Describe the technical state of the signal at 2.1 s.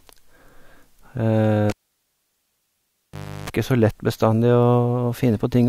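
Near silence sits there, inside the dropout from 1.70 s to 3.50 s: a pop opens it, a roughly 0.34 s burst of 50 Hz mains buzz follows as the plug's tip touches alone, then a pop restores the signal. The cause is a cable pulled and plugged in while live.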